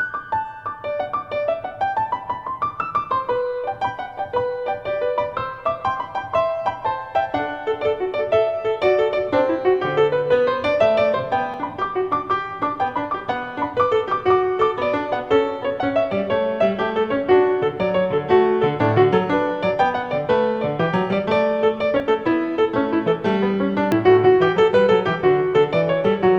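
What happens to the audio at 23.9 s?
At 23.92 s the audio jumps ahead, losing about 20 ms. The likely cause is a dropped buffer (overrun): samples were overwritten before being read, so the two sides join directly. The waveform shows an abrupt step without silence, and the spectrogram shows a thin vertical broadband line.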